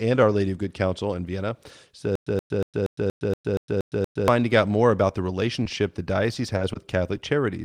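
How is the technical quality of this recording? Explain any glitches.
The recording has three kinds of glitches: a long playback stutter, several brief dropouts that were patched over, and one choppy, robotic stretch.

Stutter with silent gaps, 2.15 to 4.28 s, ending just before "out more about the": a 125 ms burst repeats every 236 ms with 111 ms of digital silence between, likely from a stalled stream replaying its last fragment. On a waveform this looks like evenly spaced identical blocks separated by flat lines.

Short concealed packet loss at 5.63 to 5.66 s, 5.69 s, 5.75 to 5.77 s (the first and third just after "out more about the") and 7.17 to 7.19 s: between 10 and 20 ms of audio never arrived, and the receiver extended the preceding sound to fill it. Each gap is heard as a tiny smear or wobble and appears on a spectrogram as a smoothed sliver.

Repeated packet loss (robotic sound), 6.34 to 6.76 s: six gaps, the longest 20 ms, were concealed in quick succession. 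About 17% of that span is patched, so it sounds choppy, and a spectrogram shows repeated smeared slices.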